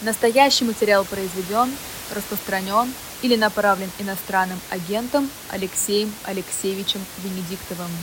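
Nothing in this speech recording points to a technical problem in the system that captured or delivered it. A room noise sits about 14 dB below the speech, which is simply the background of the space around the microphone.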